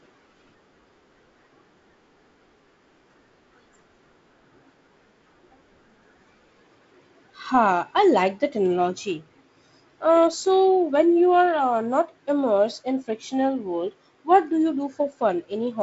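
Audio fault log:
No faults are present in this speech recording. The G.722 wideband telephone coding leaves the speech audible up to about 7.7 kHz with nothing above, and its light coarseness, especially in the lower band, fits the 48 kbit/s mode.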